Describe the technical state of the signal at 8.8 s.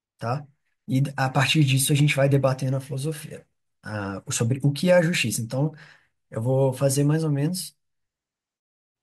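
At 8.8 s the speech signal is intact, with no audible fault at that moment.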